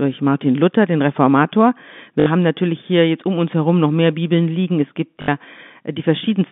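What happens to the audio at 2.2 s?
Packet loss with last packet repeated, 2.20 to 2.26 s: about 60 ms went missing and the last received packet was replayed, giving a brief robotic stutter.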